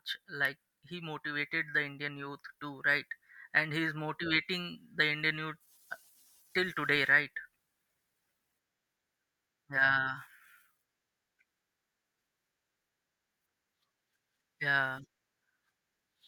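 Nothing stood out on listening to the speech recording.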